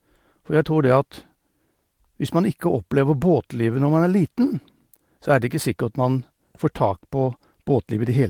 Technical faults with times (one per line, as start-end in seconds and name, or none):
none